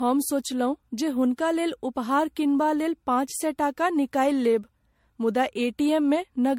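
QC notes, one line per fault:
Throughout: generation loss. The speech sounds swirly, hollow and smeared, with consonant attacks blurred and no content above 16.5 kHz. This most likely comes from repeated lossy coding, about seven MP3 passes at a rate that points to roughly 65 kbit/s. Each pass requantises on a shifted frame grid, so noise and spectral holes accumulate. What separates it from a single low-bitrate encode is that the degradation is heavier than that rate alone would produce.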